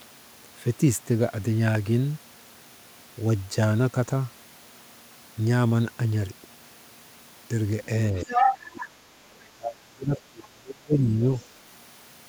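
A speech recording in which the talker's voice dips slightly from 8.12 to 8.27 s and then drops away heavily, nearly cutting out for much of the stretch from 9.55 to 11.25 s. This is speech suppressed in double talk: with both sides talking at once, the echo canceller likely couldn't separate this talker from the loudspeaker echo and turned everything down. A second voice also comes through from 8.22 to 8.88 s at roughly the talker's own level, with a very faint scrap again at 11.4 s. This is the other side's voice leaking through, likely loudspeaker playback that the echo canceller failed to remove from the microphone.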